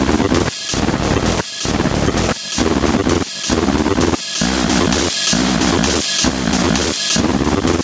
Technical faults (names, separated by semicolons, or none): gain pumping